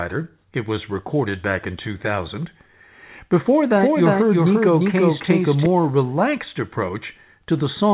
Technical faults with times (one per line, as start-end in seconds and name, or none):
3.76-5.66 doubled audio track